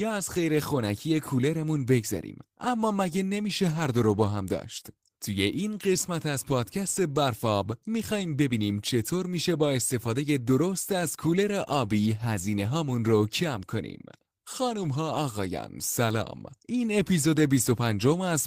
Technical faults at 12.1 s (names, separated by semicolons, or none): none